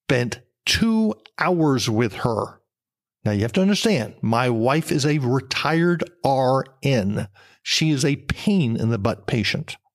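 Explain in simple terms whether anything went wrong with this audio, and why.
Nothing went wrong here: the speech comes through steady and whole, with no glitches, dropouts or odd noises anywhere along the way.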